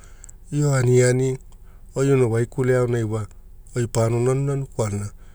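No technical faults can be heard anywhere in the recording.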